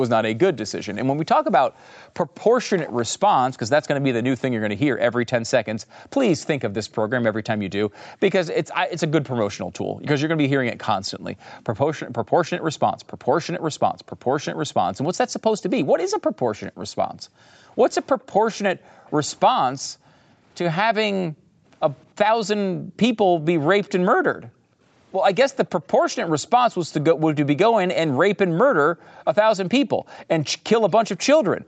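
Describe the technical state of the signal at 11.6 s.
At 11.6 s the background is gated by the echo canceller. This gating runs from 1.7 s to the end of the clip. While the far end's audio plays through the loudspeaker, the canceller pulls the microphone down hard. The room sound behind the speech dips or vanishes, by about 40 dB at its deepest. It comes back when the canceller releases.

From 11.56 to 11.64 s there is also a brief echo leak. A very faint delayed copy of the speech appears, trailing it by about 308 ms. It is far quieter than the speech and lasts only a scrap before it stops. The likely cause is a loudspeaker-side echo canceller that did not fully remove what its microphone picked up, so a remnant was sent back down the call.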